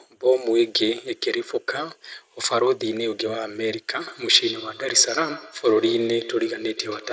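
From 3.99 s to the end, there is feedback echo between two devices. A second device replays the call, and this microphone recaptures it beyond its own echo canceller's reach. The speech returns roughly every tenth of a second, thin and ringing, peaking about 14 dB below the speech.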